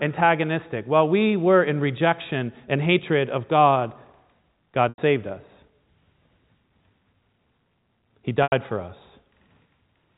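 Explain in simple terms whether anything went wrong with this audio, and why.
Twice the speech briefly catches: at 4.89 s, just before "saved us", and again at 8.43 s, a held buzzy sound fades out, then the speech returns. This is packet loss with pitch repetition. About 90 ms of audio went missing each time, and the receiver filled it by repeating the last bit of voice until it faded.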